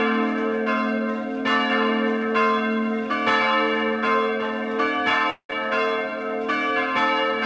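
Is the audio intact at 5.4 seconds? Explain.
No. From 5.30 to 5.51 s the audio breaks up, most likely from a long network dropout. About 200 ms of sound never reaches the listener. The receiver covers the gap by stretching the last sound it had into a buzzy tail that fades away. That fill lasts about 190 ms, and roughly 90 ms of it is plain silence. The sound then resumes at 5.51 s, with the lost part simply gone.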